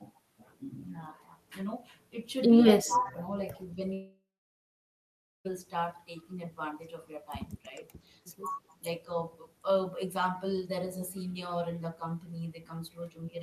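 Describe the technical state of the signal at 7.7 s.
Speech suppressed in double talk runs from 7.62 to 7.82 s. The speech dips by roughly 10 dB for about 150 ms of that span, most likely because an echo canceller, faced with both sides talking at once, turned down the near talker along with the echo.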